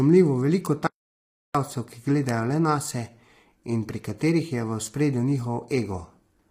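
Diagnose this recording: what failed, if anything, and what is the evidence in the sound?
Throughout the speech, the voice sounds rough and grainy, with noise filling the gaps between harmonics and a thin, synthetic-sounding top band. This is heavy low-delay AAC compression at the codec stage, most likely AAC-ELD at a low rate, which fits about 24 kbps. Its short frames resolve pitch harmonics poorly and leave too few bits per frame. The damage is steady rather than intermittent, which separates it from network loss.

A bit error spike at the storage or digital-link stage causes three isolated sharp ticks: at 0.66 s, at 2.29 s just before "le nase", and at 4.87 s just after "pri katerih je v". Each tick spans one to three samples and is broadband and unrelated to the speech around it. A flipped bit makes the sample value jump by a power of two and then return. Clicks from a buffer underrun would instead come with gaps or repeated audio.

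From 0.87 s to 1.55 s the audio cuts out for about 0.68 s. This is an audio dropout to silence. The gap is silent with no room tone, and the speech stops and resumes in mid-flow. The likely cause is a lost input, such as a disconnected device, a failed link or a stray mute, while the recorder kept writing silence. Codec packet-loss concealment would fill the gap with smeared sound instead of leaving it empty.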